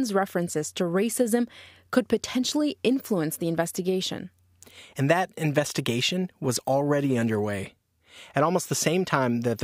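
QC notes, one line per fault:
No technical faults detected.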